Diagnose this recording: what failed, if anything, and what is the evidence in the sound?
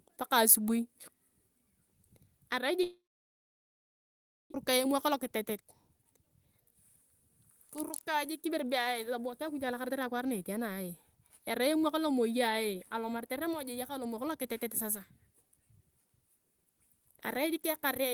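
At the network stage, the speech cuts out at 2.83 s and returns at 4.56 s, most likely a long network dropout. The receiver first continues the last sound as a fading buzz, then falls to silence or a low steady floor for about 1.5 s. About 1 s of speech is simply gone when audio resumes. On a waveform this looks like a decaying, repetitive stretch flattening to near nothing. On a spectrogram it shows as smeared harmonic bands thinning into an empty or noise-floor region.

In the receive buffer, right after the gap, a jitter buffer speed-up follows: 4.78 to 6.75 s runs at 122% speed, and 7.77 to 10.3 s at 109%. Pitch stays put, but the speech sounds hurried, most clearly in the first stretch. Having taken on roughly 700 ms of extra delay, the receiver repeatedly cut out short pitch-period pieces, about 400 ms and 200 ms in total. On a spectrogram, harmonic spacing is unchanged while syllables are compressed in time. 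On the waveform, the cycles keep their length, with whole periods cut out.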